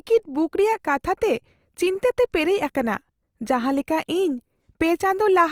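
Throughout the clip, the speech was likely squeezed through Opus compression in its music mode at a low bitrate, around 24 kbps judging by the damage. Starved bands are filled with noise, so the voice sounds plainly rough and grainy, though the bandwidth stays fullband up to about 20 kHz.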